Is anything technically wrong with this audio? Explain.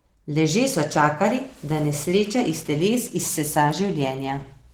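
Yes. The whole clip carries Opus voice compression, and the damage is plainly audible. The codec is running in hybrid mode: the speech below 8 kHz is coded by SILK linear prediction and the upper band by a CELT layer, with content reaching about 20.3 kHz. The excitation is coded coarsely, which fits a bitrate around 16 kbps, so the speech sounds hoarse and slightly robotic.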